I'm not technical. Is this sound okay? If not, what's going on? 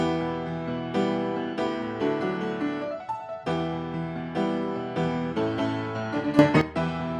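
No. From 6.39 to 6.61 s there is a sudden gain jump: the sound and its background noise together get abruptly much louder, then drop back. The likely cause is a volume setting applied instantly instead of being smoothly faded in.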